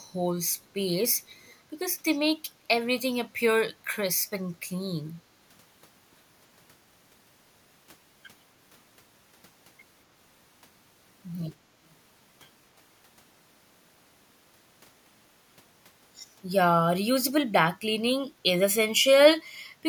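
A speech clip in which, from 1.45 to 1.53 s, a very faint delayed copy of the voice slips through, trailing the original by 240 ms and sitting far below it, roughly 35 dB down, so it registers as a brief ghostly scrap rather than a clear repeat. This is an echo leak, likely from the far end playing the call over a loudspeaker while its echo canceller let a sliver of that playback, picked up by its microphone, return down the line.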